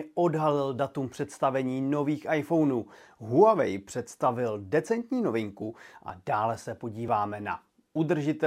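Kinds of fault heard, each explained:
Dropped buffer (overrun): two brief skips in the speech, at 6.10 s and 7.08 s, each a sudden jump where the sound skips ahead by a few milliseconds with no gap, likely from samples overwritten before being read; the waveform shows an abrupt discontinuity, the spectrogram a thin vertical broadband line.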